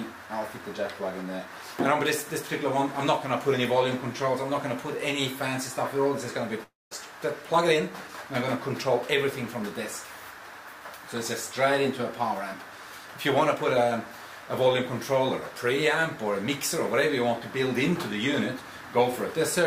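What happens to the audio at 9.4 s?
Nothing goes wrong at 9.4 s; the audio is intact at that moment, with no dropout, click, distortion or other fault to be heard.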